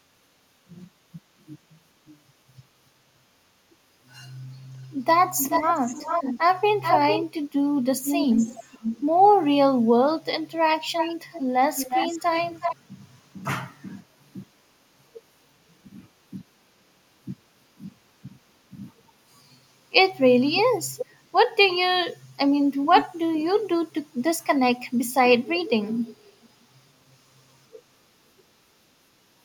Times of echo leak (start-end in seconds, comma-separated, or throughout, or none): 1.41-2.18, 5.37-7.23, 8.03-9.01, 10.72-12.76, 20.57-21.06